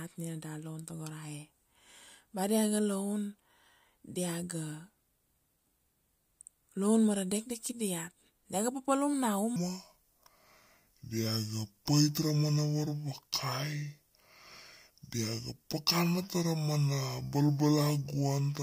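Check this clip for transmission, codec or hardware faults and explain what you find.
One fault is present. A section at the wrong speed runs from 9.56 s to 18.62 s. Playback drops to 0.66 times the original rate, likely from the audio being played against the wrong clock, so pitch and tempo fall together. The speech sounds about seven semitones deeper and noticeably dragged.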